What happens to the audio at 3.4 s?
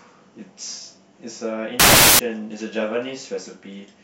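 Nothing goes wrong at 3.4 s; the audio is intact at that moment, with no dropout, click, distortion or other fault.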